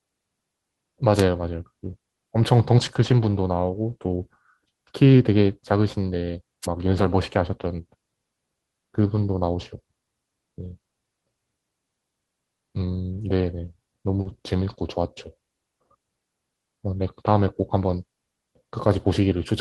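At 1.14 to 1.23 s, and again at 6.62 to 6.67 s, the radio link of the analogue FM microphone faded as reflections cancelled, so receiver noise rose over the speech. Each wireless microphone noise hit comes through as a brief swish of static.

At 2.85 s one packet was lost, and the decoder played the low-bitrate copy carried in the next packet, a lost packet rebuilt from error correction. The 20 ms with no gap sounds rougher. The same recovery covers a longer stretch from 6.83 to 7.13 s. The rebuilt speech there, about 160 ms in total, fits several separate packet losses. It turns grainier and noisier, within the Opus call's band, which reaches 12 kHz.

At 14.21 to 14.27 s about 40 ms arrived too late, and the receiver extended the preceding sound to bridge it. This short concealed packet loss is heard as a quick smear. It overlaps a further rebuild from error correction at 14.25 to 14.31 s, which leaves a rough, noisier patch.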